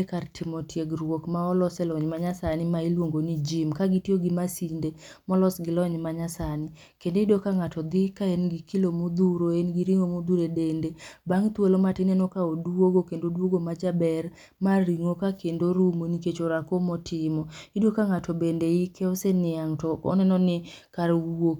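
No technical faults are audible anywhere in the speech.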